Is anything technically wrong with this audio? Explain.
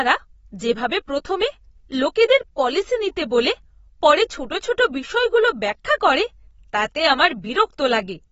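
Yes, there's plainly audible codec damage running through the whole speech clip, likely AAC compression at a low bitrate. Nothing comes through above a lowered cut-off, so the top end is simply gone, and the sound is dull and smeared. The encoder works frame by frame, quantising frequency lines against a hearing model. Starved for bits, it drops the highest band and thins out the rest. The damage fits AAC-LC at roughly 24 kbps.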